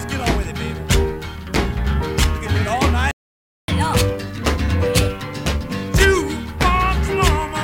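At 3.11 s the sound cuts out mid-flow and stays silent until 3.68 s, a gap of about 570 ms. This is a playback stall. The player likely ran dry of data or had its thread blocked, so output simply stopped.

From 3.68 s to 5.96 s comes catch-up at higher speed. The player resamples its backlog to regain lost time. Everything runs at 1.25 times normal speed. Pitch rises by about four semitones, then both drop back to normal.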